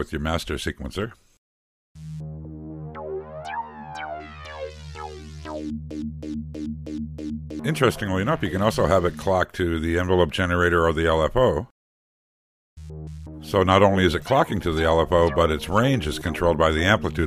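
From 5.91 s to 7.59 s the audio catches on a short fragment, about 0.32 s long, and plays it five times back to back with no variation. It is a broken-record loop: a stutter that repeats exactly and then drops back into the stream, with whatever should have filled those 1.7 seconds simply gone. The likely cause is a player, encoder or stream stalling and re-sending the last piece it held until data resumed.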